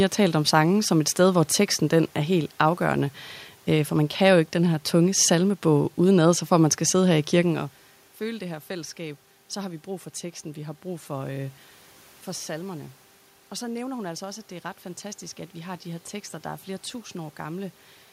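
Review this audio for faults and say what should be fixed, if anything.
Nothing to fix: no system faults detected; the room noise and the level shift around 7.5 s, where the talker moves relative to the microphone, belong to the recording itself.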